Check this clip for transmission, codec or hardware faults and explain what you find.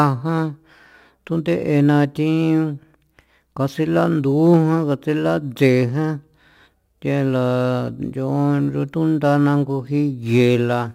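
One fault runs through the whole speech clip: crude rate conversion. It fits a 44.1 kHz to 48 kHz change made by nearest-sample picking, repeating about one sample in twelve unfiltered. The error sits roughly 35 dB below the speech, heard as gritty, inharmonic fizz on louder, brighter passages. A spectrogram shows faint stray lines unrelated to the voice harmonics, and the zoomed waveform shows regularly duplicated samples.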